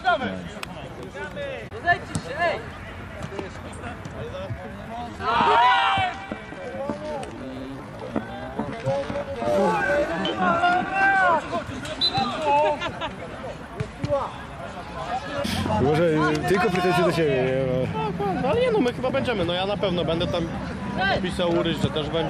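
From 4.46 s to 11.18 s the audio becomes a time-stretched section. The pace abruptly drops to about 0.66 times normal speed, yet the pitch does not fall. Software has likely stretched this stretch of sound to fill a longer slot. It holds pitch by repeating short fragments to pad out the time. The slowed passage drags. Normal pace returns at 11.18 s.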